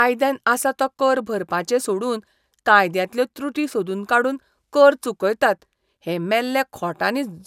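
No technical faults can be heard anywhere in this speech recording.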